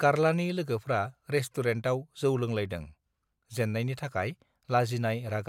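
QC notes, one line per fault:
No faults heard in this speech recording.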